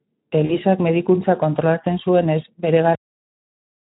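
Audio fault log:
0.45–0.57 s, VoIP packet loss concealed by the speech codec: just before "medikuntza kontrolatzen zuenez bere", about 40 ms of audio goes missing. The decoder stretches its last pitch and filter into a fading buzzy tone or coloured noise, with weakness lingering afterwards, unlike a hard dropout to silence.
2.95 s, cut-off end: right after "medikuntza kontrolatzen zuenez bere", the audio stops mid-sound and falls straight to digital silence with no decay through to the end. The final buffers were never played, so unlike a fade-out there is no tail.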